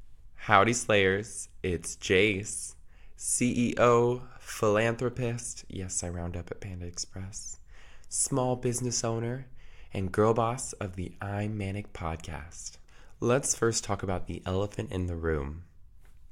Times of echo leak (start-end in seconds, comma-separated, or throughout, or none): none